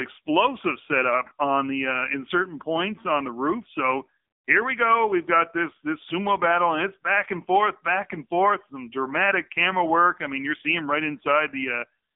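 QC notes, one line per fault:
Throughout: AMR narrowband mobile codec. The speech has the boxed-in, buzzy, synthetic quality of a heavily squeezed phone call. Nothing above about 3.7 kHz survives and the low end thins below 250 Hz, so the band sits roughly between 250 Hz and 3.6 kHz. Damage is heavy, fitting a low mode near 6.7 kbps, where a few pulses per 5 ms subframe drive a vocal-tract model. A spectrogram shows a hard ceiling near 3.7 kHz with smeared, blocky harmonics.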